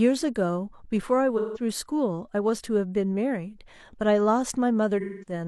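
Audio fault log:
1.37–1.61 s, AAC frame loss with concealment: about 170 ms of frames drop out, and the decoder rebuilds them from the last good spectrum, leaving a smeared, noisy patch.
5.00–5.32 s, AAC frame loss with concealment: about 210 ms lost across a 340 ms stretch, the longest gap around 200 ms, patched from stale spectral data, so the sound turns smeared and phasey.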